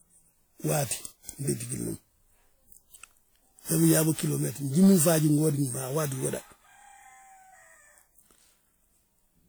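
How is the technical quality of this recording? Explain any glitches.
The speech has a swirly, hollow, smeared character throughout, with softened consonant attacks and nothing above 20.1 kHz. This is likely generation loss: repeated lossy encoding, around ten passes, pointing to WMA at 96 kbit/s, each on a shifted frame grid, stacking quantisation noise and spectral holes.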